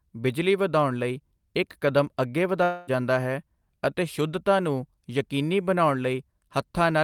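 A long network dropout runs from 2.63 to 2.90 s in this speech. For about 0.24 s the receiver stretches the last sound it had into a buzzy, hissing continuation that fades, but the gap never falls to silence before the speech resumes. That stretch of the original speech is simply gone, so the talk picks up further along than where it broke off. The likely cause is a run of lost or late packets that the playback side had to fill in.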